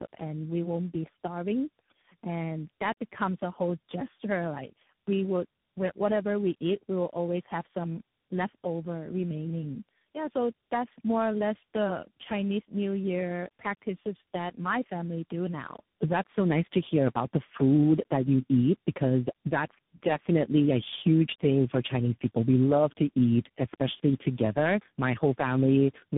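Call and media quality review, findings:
Tandem speech coding throughout: rough, muffled, warbly, nothing above 3.8 kHz. Points to three codecs in series, CVSD last, each recoding the previous one's damage.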